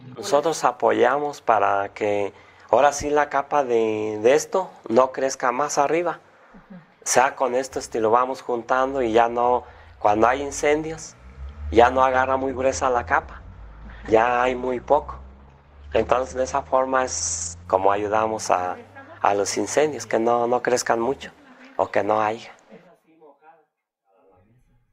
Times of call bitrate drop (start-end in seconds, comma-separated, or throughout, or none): 12.15-17.73